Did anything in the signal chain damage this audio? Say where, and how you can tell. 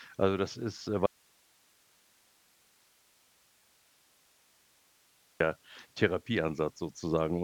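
Yes: audio dropout to a faint residue, 1.06 to 5.40 s. Speech cuts abruptly to hiss about 35 dB down, likely an intermittent analogue connection.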